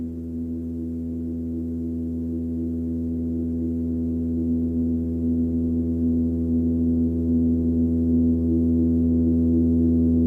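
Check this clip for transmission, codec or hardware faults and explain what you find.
Nothing stood out on listening to this recording that would point to a transmission, codec or hardware problem.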